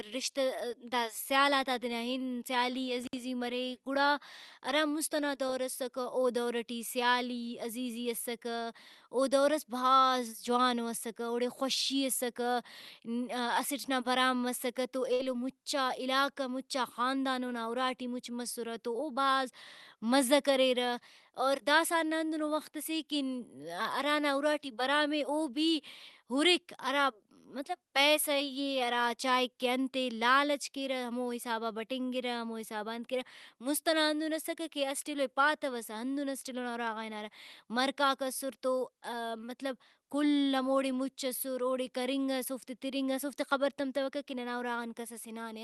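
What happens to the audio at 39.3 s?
At 39.3 s the audio is intact, with no fault at that moment.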